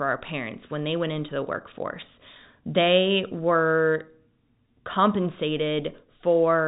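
No faults are audible: the speech carries the narrow band of G.711 telephone coding, with nothing above about 3.8 kHz and its level-following quantisation noise faint at most.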